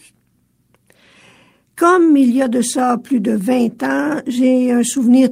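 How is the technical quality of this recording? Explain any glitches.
The technical quality of this recording is good, and there are no glitches to explain.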